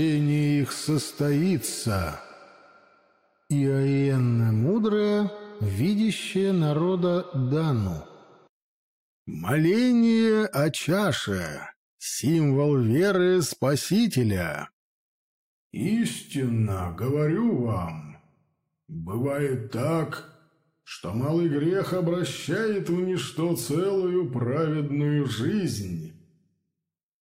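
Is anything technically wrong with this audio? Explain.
No, no technical faults detected.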